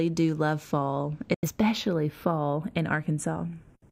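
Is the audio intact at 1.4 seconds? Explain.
No. A digital broadcast dropout runs from 1.34 to 1.49 s: the receiver lost valid frames, which points to a couple of frames failing, and muted until good data returned. The audio cuts out with a very fast fade of about 3 ms, and the material sent during that gap is gone.

Across the whole clip, including this moment, the channels are drifting apart. The two sides run on slightly mismatched clocks, off by a few tens of parts per million, so their offset creeps to only about a tenth of a millisecond by the end. Summed to mono, this produces slowly sweeping comb notches, a slow flanging.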